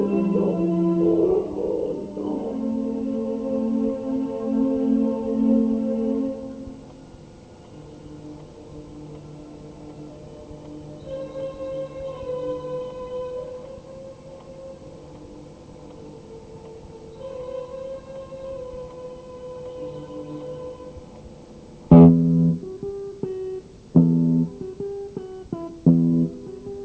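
Nothing stood out on listening, with the sound arriving over a call path whose G.722 coding leaves nothing above 8 kHz.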